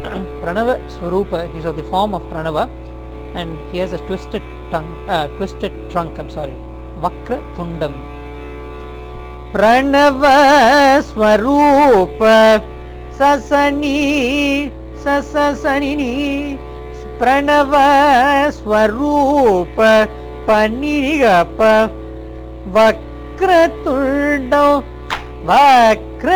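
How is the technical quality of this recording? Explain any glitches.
A gritty, inharmonic fizz rides on the sound for the whole recording, so the technical quality is compromised by crude rate conversion. The grit clings to louder and brighter passages, adding tones that don't belong to the material, sitting roughly 30 dB below it. The sample rate was changed without a proper filter by picking the nearest existing sample rather than interpolating. The resulting timing error repeats in a fixed pattern, which fits a conversion from 48 kHz to 44.1 kHz.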